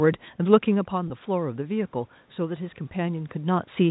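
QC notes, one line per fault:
0.91–3.67 s, automatic gain rising: the level reaching the microphone drops by about 9 dB after the talker moves back around half a second in, so the gain control judges the input too quiet and lifts its gain by about 4 dB over nearly three seconds. Voice and room noise swell together. On the waveform the envelope climbs gradually, and on a spectrogram the noise floor between phrases brightens at the same rate.
1.08–1.10 s, packet loss with pitch repetition: about 20 ms of audio goes missing, which fits a single lost packet. The receiver fills the gap by repeating the last pitch period, so the sound briefly holds as a slightly buzzy, static tone. On a spectrogram the harmonics run flat and unchanging for that instant instead of gliding. On the waveform one cycle shape repeats identically before normal variation resumes.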